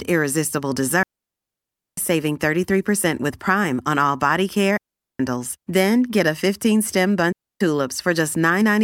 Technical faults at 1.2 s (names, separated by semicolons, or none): digital wireless dropout